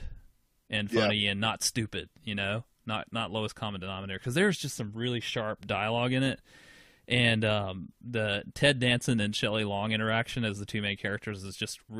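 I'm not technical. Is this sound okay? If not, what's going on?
Yes, this one's fine: nothing in the recording sounds broken or glitchy, so there's nothing to worry about here.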